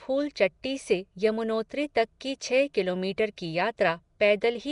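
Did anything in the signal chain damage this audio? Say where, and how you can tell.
Yes, at the codec stage: likely Nellymoser compression throughout, with rough, hissy noise-filled bands and nothing above 10.6 kHz. That noise fill, not warbly swirling, sets it apart from MP3-style artefacts.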